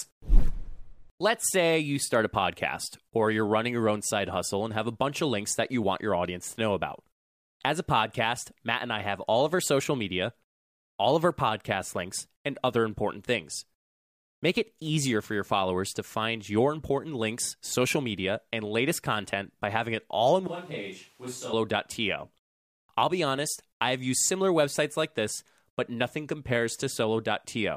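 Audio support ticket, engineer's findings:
Speech turns abruptly roomy and hollow at 20.47–21.53 s: thinner bass, roughly 10 dB quieter, more room noise. Likely a switch to a distant microphone after the close mic dropped.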